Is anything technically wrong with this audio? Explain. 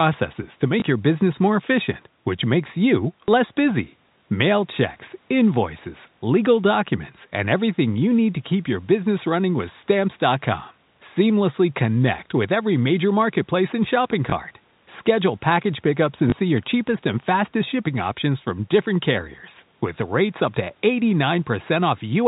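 Yes. The speech has packet loss with the last packet repeated, at 0.80–0.82, 3.27, 7.94, 14.30–14.32 and 16.30–16.32 s. Each time, about 20 ms went missing, which fits one lost packet. The receiver replayed the previous packet. That replay falls out of step with the pitch. Each event is a small blip. The telephone-band G.711 coding itself is heard as normal narrowband sound.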